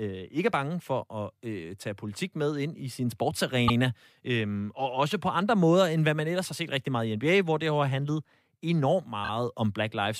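Brief stutters at 3.67 s and 9.24 s are repeated frames: a compressed block of about 78 ms plays twice, then a 26 ms block three times, each lengthening the audio.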